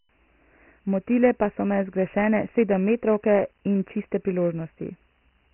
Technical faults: Dialogic VOX ADPCM

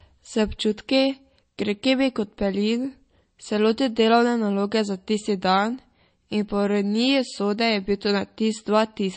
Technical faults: MP3 compression

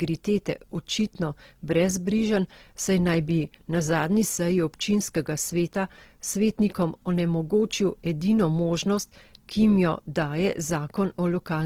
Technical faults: Opus compression

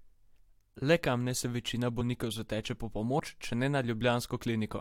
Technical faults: compressed frames skipped

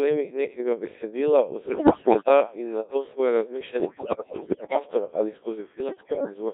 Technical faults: Codec 2 vocoder; bit errors on digital voice radio

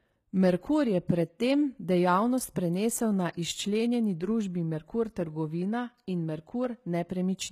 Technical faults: HE-AAC compression

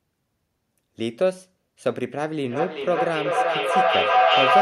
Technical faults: feedback howl

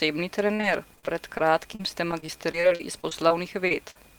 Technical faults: repeated packet loss (robotic sound); short concealed packet loss; burst of packet loss

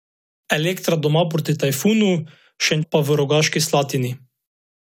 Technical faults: stream segment skipped

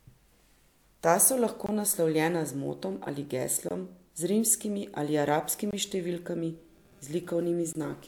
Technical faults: gap between chunks

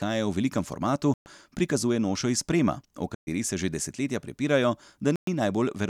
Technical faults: Bluetooth stall; playback stall

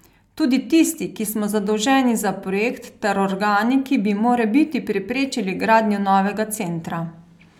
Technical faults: none

